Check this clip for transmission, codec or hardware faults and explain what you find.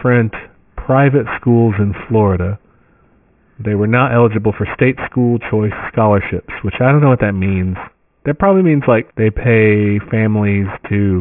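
One fault runs through the whole clip. Aliasing, throughout: the speech was resampled without an anti-alias filter, so content above 3 kHz folds back as gritty, metallic sibilance about 20 dB below the voice, which fits a drop to roughly 6 kHz.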